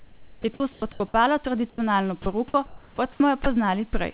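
From 0.0 to 1.0 s the speech is chopped by the voice detector, likely because the sender's detector kept toggling transmission. About 680 ms of quiet syllables and word edges are swapped for comfort noise. Unlike a single dropout, the detector switches more than once here, and the real room noise sits about 40 dB below the speech. At 1.7 to 1.78 s the sound is dropped by the voice detector, likely after the detector mistook a soft stretch for background. About 80 ms becomes steady comfort noise, and roughly 30 ms of speech is lost. It is one clean gap with a single switch out and back, not a rapid flicker. From 2.22 to 3.46 s the chopping returns, with about 520 ms replaced as the detector switches more than once. The telephone-band 4 kHz ceiling of the call path runs through all of it.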